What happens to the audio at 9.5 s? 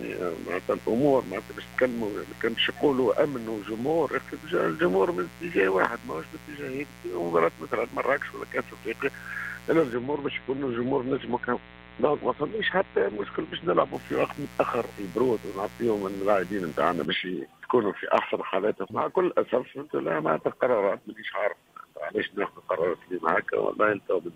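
At 9.5 s the clip is inside a stretch of mains buzz running from 0.0 to 17.05 s. Switching spikes from the 60 Hz supply leak into the signal path twice per cycle, stacking harmonics into the kilohertz range, heard as a steady, raspy buzz roughly 20 dB below the sound.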